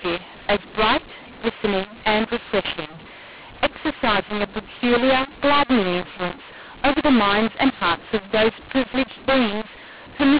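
Throughout, the speech has a mu-law and A-law mix-up: samples coded on the mu-law curve are decoded as A-law, which scrambles the levels. It sounds harsh and gritty, and the pauses fill with hiss. The waveform never settles to silence, and the spectrogram shows noise smeared across gaps below 4 kHz.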